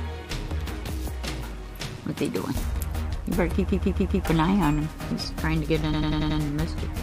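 From 3.67 to 4.23 s, repeated frames: a 139 ms block plays four extra times, a stutter. From 5.92 to 6.39 s, a 93 ms block repeats five more times. Each loop lengthens the audio by the repeated time.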